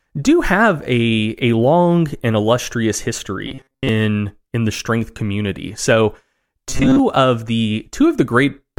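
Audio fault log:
3.47–3.89 s and 6.70–7.00 s: robotic sound from repeated short buffers; speech turns to a rigid 134 Hz buzz, likely from a 7.5 ms fragment repeating in place of most of the real audio.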